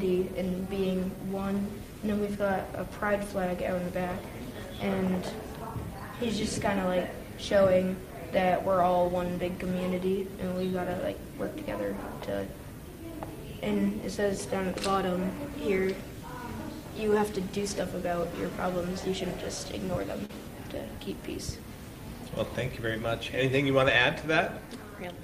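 At 20.25 to 20.31 s the audio briefly smears, a short wobble where the sound seems to hang on itself for a moment before blending back into place. This is short concealed packet loss. About 40 ms of the stream arrived too late or not at all, and the receiver covered roughly 36 ms of that gap by extending the preceding sound, continuing its pitch or its noise texture, then crossfading back into the genuine signal.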